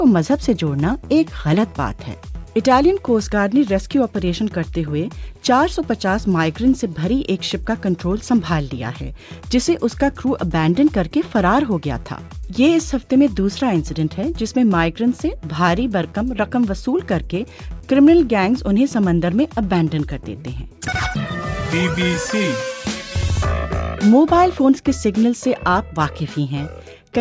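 Nothing stood out on listening to this recording.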